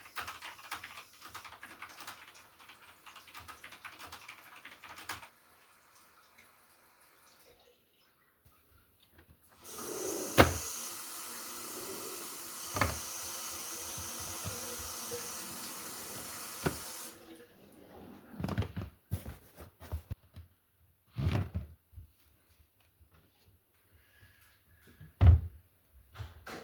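Listening to this recording of sounds, nothing stood out as a technical problem at any point.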